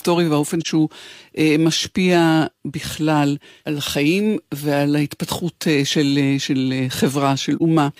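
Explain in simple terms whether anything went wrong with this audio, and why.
AAC frame loss with muting happens twice, at 0.61 to 0.67 s and 7.57 to 7.62 s. Each brief, soft-edged gap fits one lost block of compressed audio, about 43 ms long. The decoder filled that block with silence, so the speech fades out and back in.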